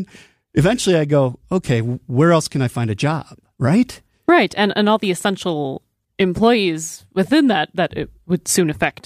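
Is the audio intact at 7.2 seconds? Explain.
No. From 7.24 to 7.30 s, just after "all the essential employees" and before "that that", there is a corrupt frame decoded: flipped bits in a few compressed frames were played anyway, so misread gains and codes drop energy at wrong frequencies. It sounds like a brief chirpy blip, peaking around -30 dBFS. A spectrogram shows blocky, frame-length patches of misplaced energy, and the waveform shows a short, jagged burst that doesn't follow the surrounding speech envelope.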